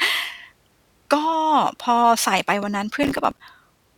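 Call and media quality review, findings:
Gritty burst of crackle tearing through the speech, 3.03 to 3.40 s, stopping cleanly afterward. Processor overload crackle: audio thread missing deadlines repeatedly, each missed buffer dropping to hard-edged silence. Gap spacing suggests buffers of about 5 ms, a dozen or more lost.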